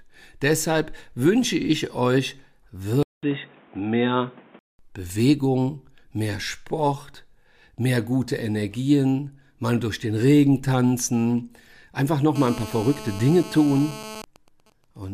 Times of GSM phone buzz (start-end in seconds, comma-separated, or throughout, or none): 12.36-14.21